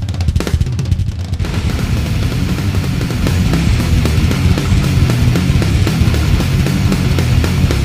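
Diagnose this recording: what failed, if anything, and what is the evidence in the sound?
Channel delay (doubling) from 0.96 to 3.22 s: a driver or buffer fault left one channel about 93 ms late, which fits a 4096-sample buffer, so the mono sum carries an equal-level slap echo.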